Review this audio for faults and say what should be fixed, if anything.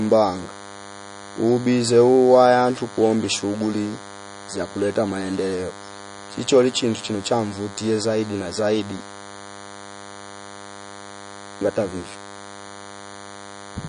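There's a DECT cordless phone buzz running the whole way through: a thin, steady 100 Hz buzz with lots of harmonics, from a nearby handset's radio bursts getting rectified, sitting roughly 20 dB under the speech.

The speech also sounds watery and swirly with nothing above 10.6 kHz, likely from MP3 compression at a low bitrate, something like 40 kbps.

Next time, keep DECT phones and base stations well away from the recording gear, and record or export uncompressed, or at a much higher bitrate.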